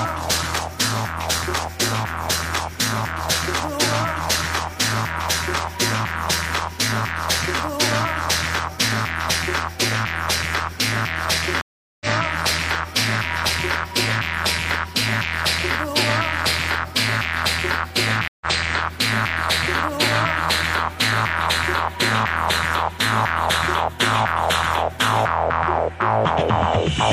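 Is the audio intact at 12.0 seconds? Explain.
No. At 12.0 seconds the sound has just dropped out: from 11.61 to 12.06 s there is roughly 0.39 s of silence, and when audio returns it has skipped ahead by about a fifth of a second and fades back in. This is a stream reconnect. The connection broke, the player fell silent, then reconnected and started a fresh decoder partway through a live stream, so playback resumes at a later point and the missing stretch is never heard.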